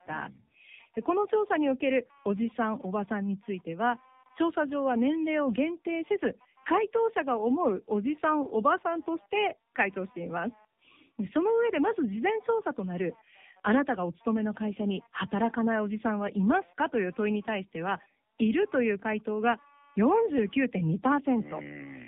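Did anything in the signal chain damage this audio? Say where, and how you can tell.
Yes. At the analogue wiring stage, computer activity noise runs through the whole clip: a faint buzzy pulsing at roughly 200 Hz, far below the speech. It tracks the computer's load rather than the speech, because processor, graphics or mouse activity is disturbing the shared ground of the audio circuit.

At the codec stage, the speech shows tandem speech coding. It sounds rough, muffled and warbly, and nothing is present above 3.7 kHz. This fits two passes through AMR-NB with a decode and re-encode between them, each pass degrading the previous pass's output.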